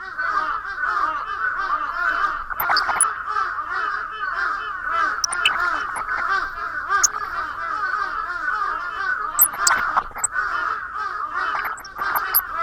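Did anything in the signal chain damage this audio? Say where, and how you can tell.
Yes. Throughout the clip the sound is dull, with a gurgling, granular texture and upper bands that flicker in and out. That points to the codec stage, likely MP2 compression at a low rate, fitting roughly 80 kbps. Starved sub-bands are switched off and the remaining ones coarsely quantised.

DAB burbling appears as bursts of short noise blips at 2.5–3.16 s, 5.22–6.21 s, 7.03–7.31 s, 9.37–10.26 s and 11.55–12.41 s. This is a reception-stage fault. Bit errors below one percent slip past error correction into the MP2 frames and corrupt samples and scale factors, putting short noise blips into single sub-bands and making sub-bands jump in level for up to a frame.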